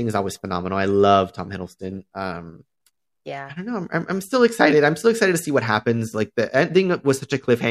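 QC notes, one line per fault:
No faults heard in this speech recording.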